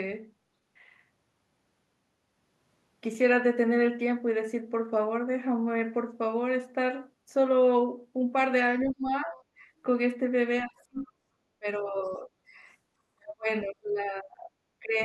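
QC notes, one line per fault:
8.83–9.35, 10.66–11.22, 11.59–12.29, 13.15–14.52 and 14.79–14.98 s: speech suppressed in double talk. The speech dips sharply, by about 10 to 40 dB, and partly drops out. This is likely the echo canceller muting the mic while both sides spoke.
9.37–9.44, 10.97–11.11 and 12.07–12.16 s: other side's voice leaking through. Brief, faint scraps of a second voice appear, about 30 to 40 dB below the speech. This is likely loudspeaker echo left in the mic signal by the echo canceller.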